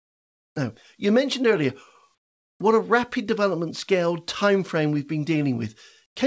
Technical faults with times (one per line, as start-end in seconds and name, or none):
6.06-6.16 comfort noise in place of the background